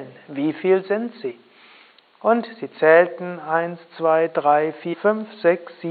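Brief smeared blips at 1.30 to 1.32 s and 4.93 to 4.95 s mark jumps where about a tenth of a second, then around 150 ms, of sound goes missing. These are compressed frames skipped. The jumps point to roughly four and seven dropped 23.2 ms frames, with overlap softening each join.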